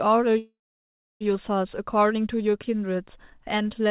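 Call audio freeze from 0.38 to 1.23 s: the speech halts, a short fading buzz carries on the last sound, then 650 ms of near silence follows before speech resumes where it stopped, with nothing lost. The likely cause is delayed packets emptying the jitter buffer.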